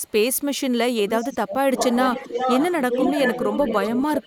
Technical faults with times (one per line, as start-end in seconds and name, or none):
0.00-0.39 echo leak
0.95-1.62 speech suppressed in double talk
1.77-4.27 echo leak